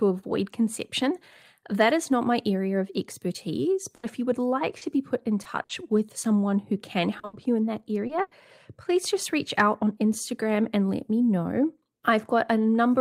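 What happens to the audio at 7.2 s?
A short concealed packet loss from 7.19 to 7.25 s patches 40 ms with extended sound, leaving a brief smear. Just after "with someone who can", a burst of packet loss follows from 7.25 to 7.35 s, where 80 ms is filled by a fading continuation, a held buzz or hiss, before the audio resumes at "you in that", so that stretch is lost rather than merely blurred.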